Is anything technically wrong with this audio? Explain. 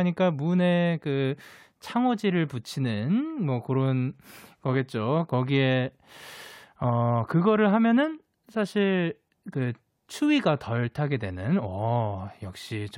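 No, nothing technically wrong stood out on listening to this speech recording.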